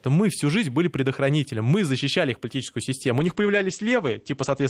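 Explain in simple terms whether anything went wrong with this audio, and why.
A call bitrate drop happens at about 3.2 s and lasts until the clip ends at about 4.7 s. The call's connection estimate fell, so the encoder was told to squeeze the speech into far less data. It saves data by describing the sound more crudely and by discarding everything above about 8 kHz. As a result, the last stretch of speech sounds duller and more muffled, with a rougher, watery texture, and it never recovers before the end.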